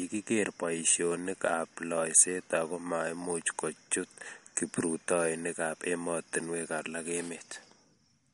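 MP3 compression, throughout the speech from start to finish: the sound has nothing above 11.2 kHz and carries plainly audible coding damage, most likely from MP3 encoding at a low rate, which fits a bitrate around 48 kbps. With so few bits, the encoder drops the treble at a fixed ceiling and discards weaker frequency detail frame by frame. The result is a dulled top end and a grainy, unsteady texture laid over the speech.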